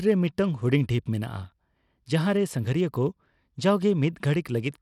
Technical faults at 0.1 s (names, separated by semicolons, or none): Bluetooth SBC compression